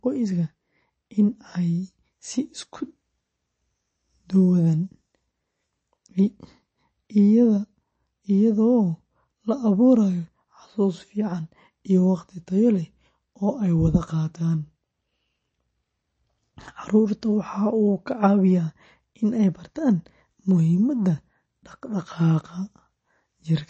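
From start to finish the speech has a watery, swirling texture, with metallic chirps on s sounds, smeared consonant attacks, and nothing at all above 8.3 kHz. These are the marks of MP3 compression, likely at a low bitrate such as 32 kbps. Starved of bits, the encoder cuts off the treble at a fixed point and discards weaker frequency lines, which then flicker in and out from frame to frame, so the damage is plainly audible.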